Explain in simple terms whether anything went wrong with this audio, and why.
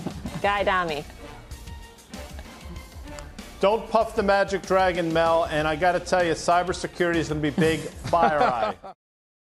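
No, nothing went wrong with this audio.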